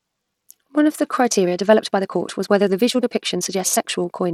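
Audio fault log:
Throughout: Bluetooth SBC compression. The speech has dulled, flickering treble with a gritty noise and aliasing riding on it, likely from the SBC codec at a starved bit pool, which fits about 96 kbps, leaving the top sub-bands with few or no bits and quantising the rest coarsely.
1.28 s to 4.34 s: time-stretched section. Right after "of the", the speech suddenly runs about 1.45 times faster while its pitch holds steady, sounding rushed, likely because software squeezed the audio by dropping short pieces to shorten it without shifting pitch.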